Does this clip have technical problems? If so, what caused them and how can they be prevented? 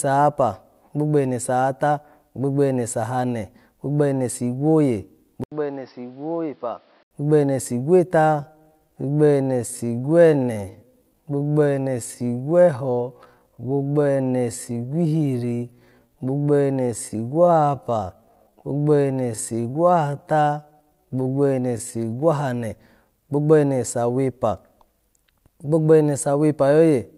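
Yes. Just after "sahane gbogbo ene sigwoye", at 5.44 s, the sound drops out for 80 ms, then turns dull and boxy. It is about 5 dB quieter, with a new noise floor about 35 dB down. It clears again at 7.11 s, before "gbogbo ene." This is likely an input switched to a poorer device, a narrower-band microphone or headset call profile. Preventing it means locking the input device in the recording software and disabling automatic switching when headsets connect.

From 8.15 s to 22.19 s, after "gbogbo ene", the pace slows abruptly to about two-thirds speed (0.668×) while the pitch stays put. This is likely a time-stretched section, where software repeated short slices to lengthen the audio. Preventing it means fitting content by editing rather than stretching, and disabling automatic length-fitting on export.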